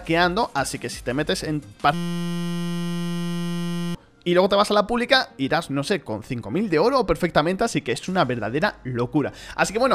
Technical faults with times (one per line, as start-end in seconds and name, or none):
1.94-3.95 system hang loop